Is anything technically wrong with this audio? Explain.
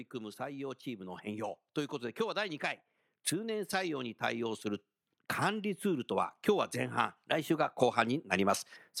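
Yes, there is one fault. From 2.16 to 4.92 s there is automatic gain rising. The gain control judged the input too quiet and raised its gain by about 4 dB over nearly three seconds, so speech and background swell together. On a waveform the envelope widens steadily, and a spectrogram brightens evenly across all frequencies.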